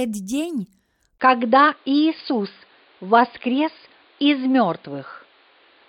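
At 1.18 s the speech drops out for about 20 ms and then returns duller and boxier, with nothing above 4.9 kHz, a level shift of a few decibels and new, faint background noise, until the clip ends. This is likely an input switched to a poorer device. A filter or codec narrowing the band would not also bring a different level and its own noise floor with a gap at the change.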